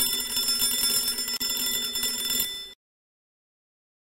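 At 1.37 s there's a gap at a join of encoded pieces: roughly 35 ms of silence where untrimmed encoder delay and padding sit, then the sound picks up where it stopped.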